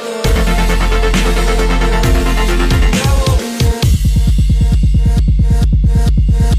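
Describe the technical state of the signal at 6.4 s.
At 6.4 s the signal is intact, with no audible fault at that moment.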